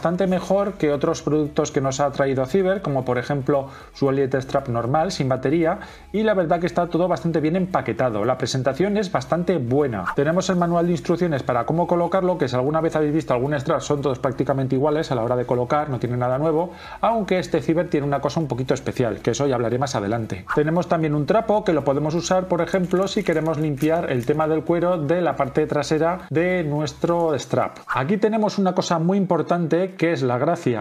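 No technical faults can be heard anywhere in this audio. Nothing breaks into the sound at any point along its course.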